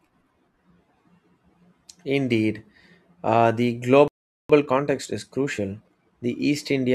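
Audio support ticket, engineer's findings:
Playback stall, 4.08–4.50 s: output silent for 0.42 s mid-flow; likely player buffer underrun or blocked thread.

Time-compressed catch-up, 4.50–6.16 s: speech hurried at 1.25x with pitch unchanged, unlike resampling speed-up; player cutting and cross-fading backlog.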